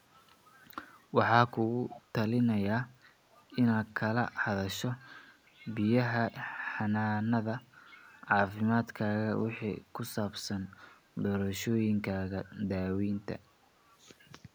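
A speech clip with one fault. From 1.89 to 2.01 s, a faint delayed copy of the voice returns about 390 ms late. It sits roughly 20 dB below the speech. This is an echo leak, likely from a far-end loudspeaker whose echo canceller let some sound through.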